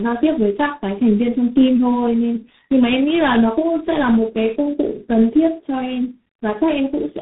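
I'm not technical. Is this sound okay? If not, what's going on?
No. This speech suffers from tandem speech coding throughout: on its way, the call was squeezed by one phone network's speech compressor, unpacked, then squeezed again by a second, each working on already damaged sound. The result is speech that is duller and more muffled than a normal call, with nothing above about 3.8 kHz, plus a rough, warbling quality that lasts the whole clip.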